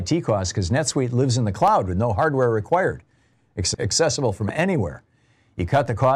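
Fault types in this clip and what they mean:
Loud pop: likely voltage pulses, two single pops at 1.68 s and 4.49 s, roughly 10 dB above the speech; narrow waveform spikes, thin vertical broadband spectrogram lines.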